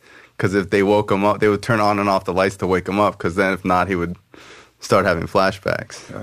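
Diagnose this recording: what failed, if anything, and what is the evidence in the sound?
Crude rate conversion failed at the sample-format conversion stage. A gritty, inharmonic fizz rides on the speech for the whole clip. It swells on loud syllables and bright consonants and sinks in quiet gaps. The error sits roughly 30 dB below the speech. The pattern points to a 48 kHz to 44.1 kHz change made by keeping the nearest sample. Samples were dropped on a fixed cycle with no filtering. That cycle creates shifted, inharmonic copies of the speech.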